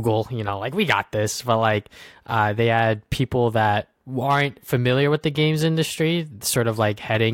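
No technical faults can be heard in the recording.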